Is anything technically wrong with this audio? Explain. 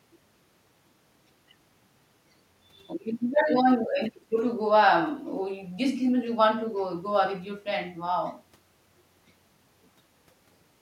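No, the signal shows no technical faults anywhere in its length.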